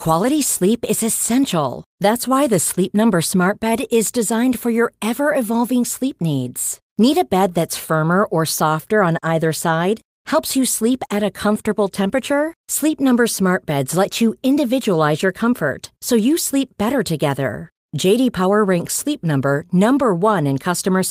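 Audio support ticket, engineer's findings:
No fault found on listening to the speech clip. No findings to log against any component.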